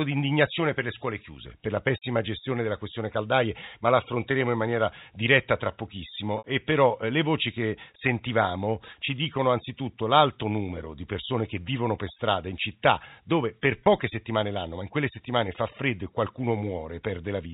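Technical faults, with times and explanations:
6.38 to 6.44 s and 13.85 s (between "in città dove per" and "settimane l'anno ma in"), packet loss with pitch repetition: lost audio of 60 ms and 20 ms was replaced by a repeated pitch period, causing a brief buzzy hold. On a spectrogram, the harmonics freeze into flat bands, and on the waveform identical cycles repeat.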